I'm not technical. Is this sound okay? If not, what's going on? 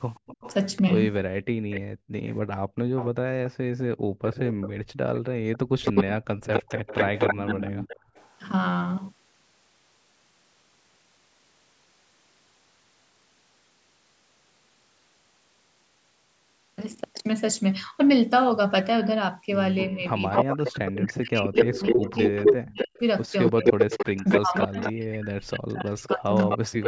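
No, there are a few problems.

Echo leak: from 0.14 to 8.32 s, and again from 19.89 s to the end, a delayed copy of the speech trails about 0.3 s behind. It's likely a speakerphone whose echo canceller let some through.

Background gated by the echo canceller: the room sound briefly drops away at 1.81–2.79 s, 3.96–4.24 s and 7.99–8.15 s, as the canceller turns the microphone right down.

Speech suppressed in double talk: around 5.72–6.21 s, and in stretches adding up to roughly four seconds from 19.97 s to the end, the talker fades or cuts out, likely because both sides spoke at once.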